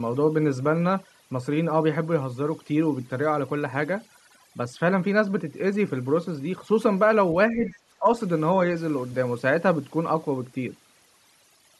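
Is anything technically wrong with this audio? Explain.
Yes. Overdone noise removal runs through the whole clip. The background sits at near silence with small twinkling specks. A suppressor set too aggressively has pushed individual frequency bands down or off wherever they came close to its noise estimate, and the quieter parts of the speech went with them. It is present from start to finish and not tied to any exchange, so it differs from the brief echo-canceller dips described next.

Speech is suppressed in double talk from 7.51 to 7.73 s, dropping by about 5 dB, and again from 8.00 to 8.07 s, dropping by about 10 dB. The cause is likely an echo canceller that could not separate the talker from loudspeaker echo while both sides spoke, so it ducked everything. These are short, level-wise dips lasting roughly a fifth of a second and then less than a tenth.

The other side's voice leaks through from 7.66 to 7.73 s, inside the first dip. 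It is a faint scrap sitting about 25 dB under the talker. The echo canceller likely failed to strip all of the loudspeaker playback from the microphone signal. What gives it away is that this is a second, separate voice fragment rather than a change in the talker's own tone. It coincides with the suppression, the signature of both sides speaking at once.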